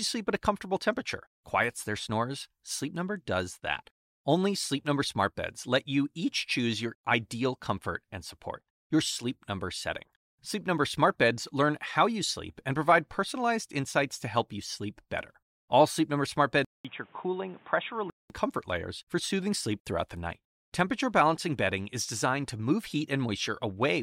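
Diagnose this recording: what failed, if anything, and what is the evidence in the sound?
At 16.65 s the speech drops out for 200 ms, then returns dull and boxy with nothing above 3.8 kHz and a new noise floor roughly 30 dB down, at much the same level, from "comfort layers for soothing" until 18.3 s. This is likely an input switched to a poorer device at the driver stage; the gap and changed background set it apart from a codec's bandwidth drop.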